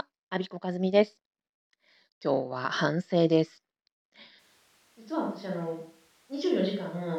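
At 4.41 s the speech abruptly turns roomy and hollow, loses bass, and drops roughly 10 dB in level, with a background noise floor of around 35 dB below the speech becoming audible. It stays that way to the end of the clip. This points to a switch to a distant microphone: the close microphone's signal likely dropped out or was excluded, leaving a pickup further from the talker that captures more room reflection and ambient noise.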